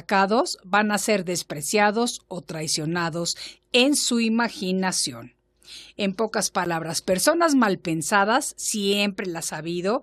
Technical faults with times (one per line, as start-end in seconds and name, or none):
6.65 block of digital silence